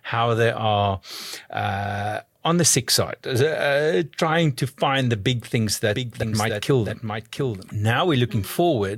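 From 5.95 to 7.69 s you get a doubled audio track: a second, full-band copy of the speech trails about 0.7 s behind, roughly 5 dB quieter, with no reverb tail, and cuts in and out abruptly. Likely cause is the audio being captured twice along a slower second path.

Right inside that stretch, at 6.22 s, compressed frames are skipped. The speech lurches forward by around 40 ms, which points to a couple of frames going missing or being rejected as damaged.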